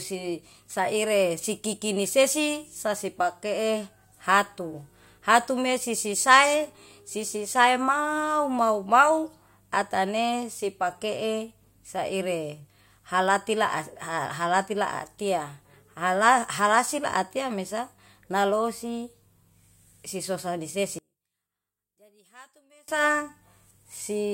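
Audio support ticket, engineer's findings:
Speech collapses to a faint residue 20.99–22.88 s, about 33 dB down. Likely one channel inverted upstream of the mono sum: centred content cancels, only the channel difference survives. Not a dropout or mute, because a faint trace stays audible rather than silence.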